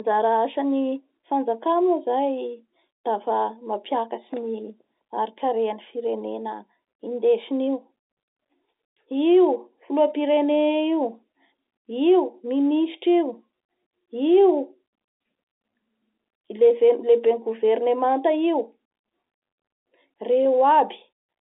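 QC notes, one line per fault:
No faults to note for this speech clip.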